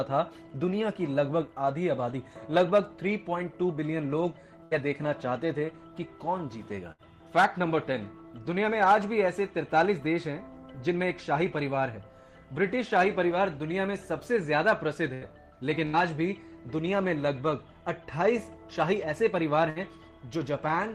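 The audio has a burst of packet loss at 4.63, 6.92, 15.14, 15.86 and 19.70 s. Each time about 60 ms goes missing: the receiver extends and fades the last sound for 58 to 78 ms, then resumes further on, skipping what lay between.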